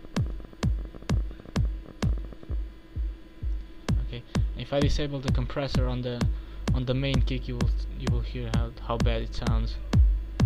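From 0.05 to 2.54 s a train of clicks runs over the sound: roughly forty sharp pulses at an uneven spacing, averaging about 15 per second and peaking at around the level of the signal itself. They are heard as ragged ticking, likely from electrical interference or a faulty connection or power supply.

At 9.22 s a DC step shifts the waveform's zero line by about -36 dBFS. The sudden offset is heard as a single low thump, then fades as a 20 Hz high-pass filter pulls the baseline back toward zero.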